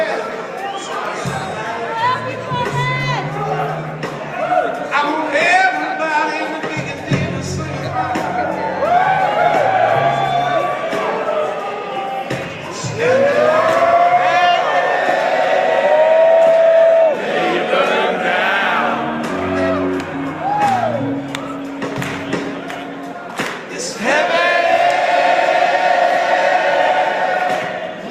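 No audible faults anywhere in this recording.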